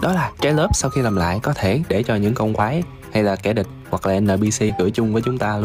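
Compressed frames are skipped at 2.59–2.64 s and 4.69–4.72 s. Missing or rejected frames make the audio jump ahead about 40 ms, then about 70 ms.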